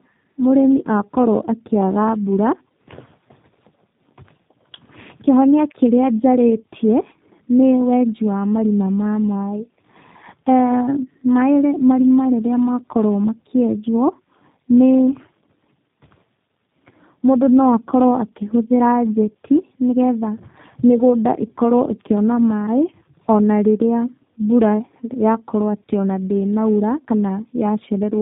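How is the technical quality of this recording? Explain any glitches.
The quality's limited by one fault running the whole way through: tandem speech coding. The speech sounds like it crossed two separate low-bitrate speech codecs in a row, each re-encoding the previous one's already lossy output. The result is rougher, more muffled and more warbly than a single pass, with nothing above about 3.8 kHz, which fits an AMR-NB leg feeding a G.729A leg.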